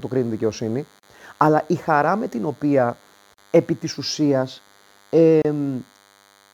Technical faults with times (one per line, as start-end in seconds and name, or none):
0.00-6.53 DECT cordless phone buzz
1.00-1.03 gap at a join of encoded pieces
3.34-3.38 gap at a join of encoded pieces
5.42-5.45 gap at a join of encoded pieces